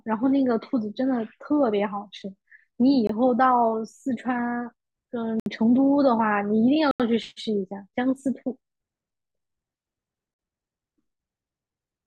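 At 3.07, 5.40, 6.91 and 10.34 s the speech cuts to a block of digital silence lasting 21, 64, 85 and 50 ms, likely as unfilled output buffers became zeros. Each hole appears as a flat waveform line and a black spectrogram gap between vertical streaks.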